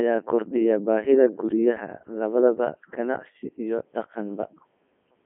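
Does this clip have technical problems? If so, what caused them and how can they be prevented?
Yes. Throughout, the speech sounds robotic and buzzy with nothing above 3.5 kHz: a Codec 2 vocoder rebuilt it from pitch and envelope, which fits its 3.2 kbit/s mode. Use a higher-bitrate waveform codec instead.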